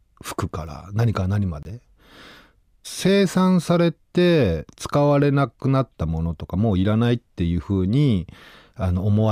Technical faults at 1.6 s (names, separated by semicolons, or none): Bluetooth dropout